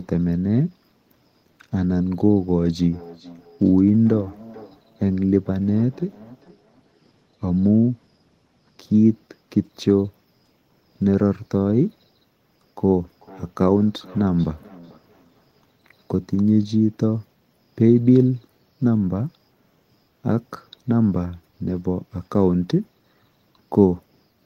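From 2.81 to 7.0 s, and again from 13.05 to 16.4 s, the speech comes back at itself as a feedback echo between two devices. There are trailing copies roughly every 0.4 s. At its strongest the echo sits about 22 dB below the speech, and about 25 dB below in the later stretch. It sounds like a second device in the room is replaying the call, with its sound leaking back into the mic. Each pass thins out and rings more.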